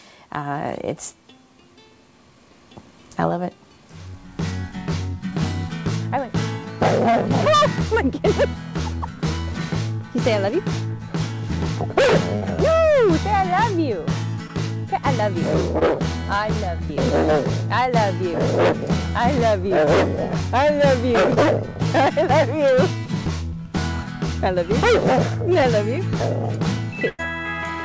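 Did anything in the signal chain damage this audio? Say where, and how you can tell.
Yes, the damage happened at the network stage of the call, upstream of the jitter buffer. There are two bursts of packet loss, at 12.36–12.43 s (about 60 ms missing) and 27.08–27.21 s (about 100 ms missing). At each one the receiver stretched the last sound and faded it down. The second burst ends in roughly 10 ms of silence before the audio resumes further on. On a spectrogram, the harmonics or noise texture freeze into flat horizontal bands that dim toward the gap's end. The waveform shows a repetitive, decaying stretch with a discontinuity where real audio returns.

Five instances of short concealed packet loss sit at 14.47–14.51 s, 15.79–15.83 s, 16.85–16.91 s, 19.85–19.88 s and 21.34–21.38 s. Most lost about 20 ms, and the one at 16.85 s lost 40 ms. Each is a brief smear or wobble where the decoder synthesised a continuation and then crossfaded back, so a short transient can drop out. 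On a spectrogram these show as narrow vertical smudges with blurred onsets. The waveform looks locally periodic or noisy with no natural attack. All of this rides on a G.722 call path, visible as nothing above 8 kHz.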